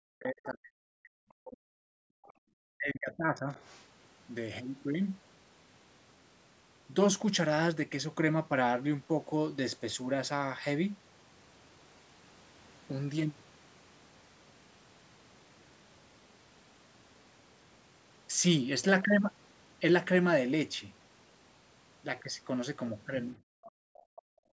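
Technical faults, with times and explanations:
0.09–1.81 s and 2.74–3.50 s, speech suppressed in double talk: the talker's level sinks by roughly 40 dB and 35 dB, likely because the echo canceller heard both sides at once, could not separate this talker from loudspeaker echo, and turned everything down.
2.09–2.46 s and 23.38 s to the end, background gated by the echo canceller: the room sound drops by about 40 dB, briefly in the first case and for roughly a second in the second. The canceller clamped the microphone hard while the loudspeaker played, then released it.
2.25–2.33 s, 3.54–3.85 s, 23.66–23.71 s and 23.94–24.21 s, other side's voice leaking through: short, faint scraps of a second voice appear, about 30 dB below the talker in the early two and 25 dB below in the late two, likely residual loudspeaker echo the canceller failed to remove.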